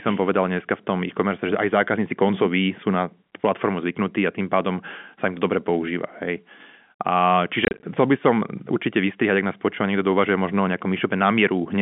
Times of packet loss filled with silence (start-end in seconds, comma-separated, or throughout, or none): 7.65-7.83